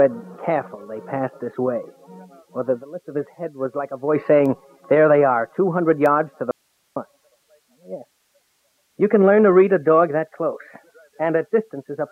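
Bit error spikes at 4.46 s and 6.06 s each appear as a single sharp tick, one sample long, spread across the whole spectrum and unrelated to the surrounding audio: a flipped bit briefly throws the sample value off by a power of two before it snaps back. An audio dropout to a faint residue follows from 6.51 s to 6.96 s, an abrupt 0.45-second loss of the sound leaving only hiss roughly 50 dB below the normal level. The likely cause is the signal feed breaking while the downstream path stayed live, so its noise floor carried on through the gap.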